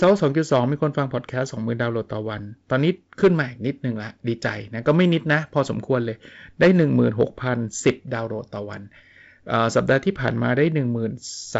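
No technical faults can be heard in this speech.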